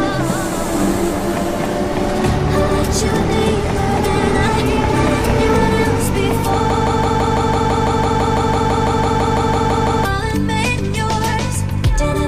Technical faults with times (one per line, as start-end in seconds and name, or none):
6.70-10.05 broken-record loop